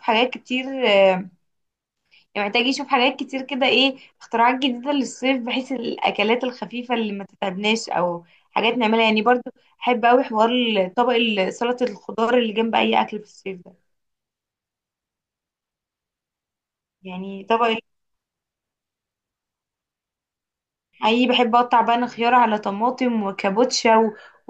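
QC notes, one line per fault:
No faults detected.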